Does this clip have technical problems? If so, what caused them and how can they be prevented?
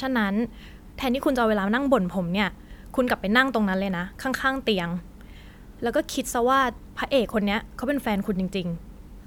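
No, nothing in this speech recording points to a technical problem, so there is no cause to trace and nothing to prevent.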